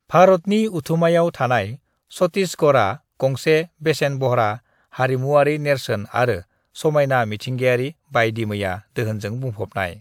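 No technical faults can be heard anywhere in the recording.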